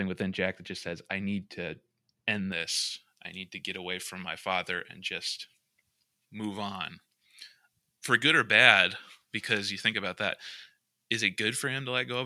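Speech, with pre-emphasis left on from 2.52 s to the end: the treble boost was never undone by the matching cut, leaving 10 kHz about 11 dB up on 1 kHz and making it thin, bright and sibilant. The lift rises with frequency above 1 kHz.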